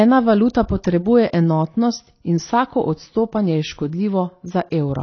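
From start to finish, the speech is dull and smeared. Nothing is heard above 6.5 kHz. Sibilants fizz and sustained sounds warble. This is likely AAC compression, which fits AAC-LC at a low bitrate of about 24 kbps, with spectral detail discarded.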